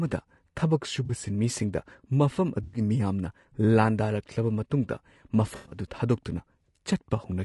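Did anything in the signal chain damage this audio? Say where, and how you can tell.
Yes. At the codec stage, the speech sounds rough and grainy throughout, with noise between harmonics, likely low-delay AAC compression squeezed to around 32 kbps.

Also codec-side, there is AAC frame loss with concealment: smeared, noisy patches at 1.05–1.11 s, 2.63–2.81 s and 5.55–5.78 s, where the decoder papered over missing frames.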